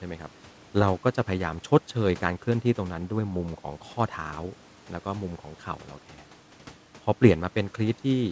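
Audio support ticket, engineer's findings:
No faults found in the speech. Room noise sits about 29 dB below the speech, and the call path carries nothing above 8 kHz, which fits G.722 at 64 kbps.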